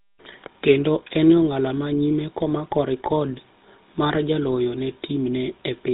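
GSM full-rate codec damage runs throughout this speech clip. Everything above 4 kHz is missing, and the voice has a plainly audible buzzy, gravelly roughness. That fits a vocal-tract model driven by regularly spaced pulses at around 13 kbps, keeping only every third excitation sample.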